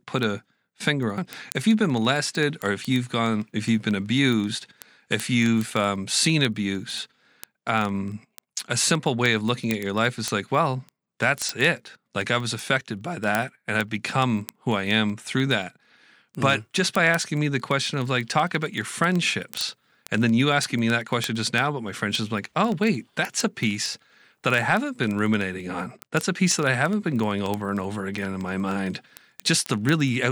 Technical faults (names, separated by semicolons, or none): word clock ticks